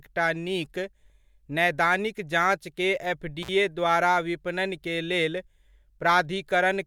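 At 3.43 s, after "नैदानिक जाँचकेँ", the speech breaks up in an intermittent contact fault lasting until 3.49 s, just before "द्वारा विपणन". A loose cable or plug connection momentarily lost contact, opening the signal path for about 45 ms. The speech drops out for that gap, and the contact making and breaking produces crackle at either edge of the dropout before the signal returns.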